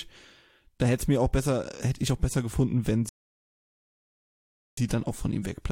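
A rebuffering stall interrupts this speech clip from 3.09 s to 4.77 s, right after "ich auch besser gefunden". The playback simply ran dry: the player exhausted its downloaded audio, fell silent, and waited for more data before carrying on. When sound returns it picks up exactly where it broke off, so nothing is skipped, but about 1.68 s of dead air is inserted into the middle of the utterance.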